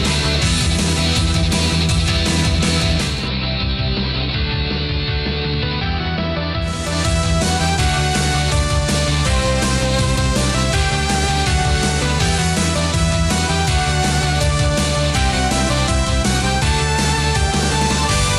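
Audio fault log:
2.9–7.0 s digital radio blending to analogue: the receiver lost its digital stream and cross-faded over 400 ms to the AM broadcast. Treble falls away, level drops about 3 dB, and hiss sits roughly 25 dB down. Unlike plain filtering, hiss arrives with the dulling, and both reverse together.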